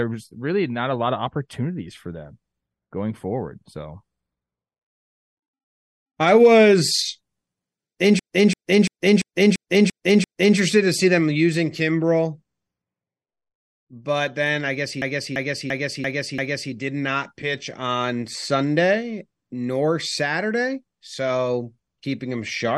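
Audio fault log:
8.19 to 10.58 s and 15.02 to 16.73 s: system hang loop. A 341 ms piece of speech repeats exactly, seven times and then five. The second run starts after "then I guess he". Playback resumes at "to see them using" and "did not pitch on", with little or no audio lost. The driver stalled while the hardware kept replaying its ring buffer. The long loop, which fits a 16384-sample buffer, gives a slow 2.93 Hz machine-gun stutter.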